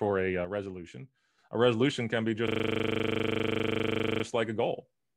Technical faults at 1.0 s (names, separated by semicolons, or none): one channel drops out